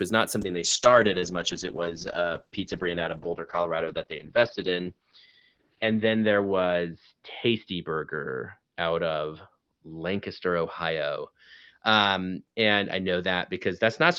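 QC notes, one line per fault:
0.41 s to end: call bitrate drop from 32 to 7 kbps, bandwidth narrowing from 20 kHz to 6 kHz, so speech turns coarse and muffled.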